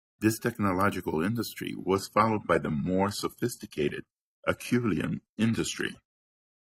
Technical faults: adaptive stream at a lower bitrate

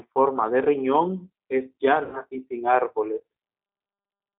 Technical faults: G.729 codec; VoIP packet loss concealed by the speech codec

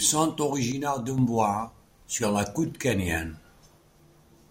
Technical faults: one channel drops out

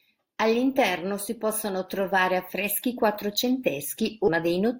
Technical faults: stream segment skipped

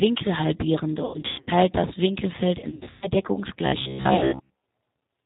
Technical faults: G.729 codec; VoIP packet loss concealed by the speech codec; robotic sound from repeated short buffers

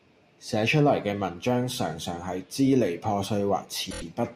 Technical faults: repeated frames

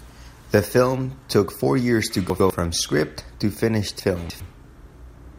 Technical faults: chunks out of order

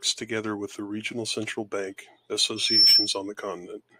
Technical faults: loudspeaker feedback squeal

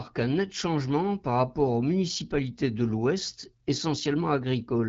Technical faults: none

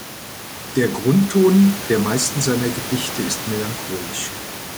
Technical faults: none

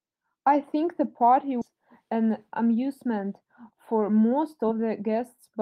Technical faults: skip ahead; jitter buffer speed-up

